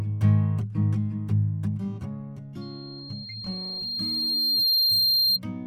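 From 2.61 s to 5.40 s the music is overtaken by loudspeaker feedback squeal. A microphone is hearing its own loudspeaker, and the loop gain has passed one at 4.2 kHz. That tone swells over roughly two seconds to sit about 5 dB above the music. A spectrogram shows it as a single bright horizontal line, and the waveform's envelope grows steadily.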